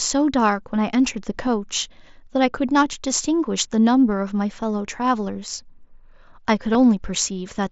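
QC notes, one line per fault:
1.28–1.47 s, sudden gain jump: sound and background noise step up together by about 4 dB, then drop back. This is likely a gain change applied without any ramp.
6.73 s, concealed Bluetooth headset packet loss: a brief 15 ms patch in the mSBC wideband audio, where a gap consistent with two lost packets was filled by repeating recent waveform.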